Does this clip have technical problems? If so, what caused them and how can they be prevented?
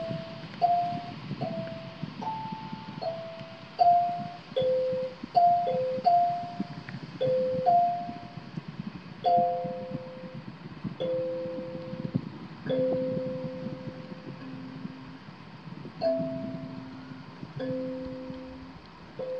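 No, nothing in this clip stood out as a technical problem on listening, so there is nothing here that calls for a fix or prevention.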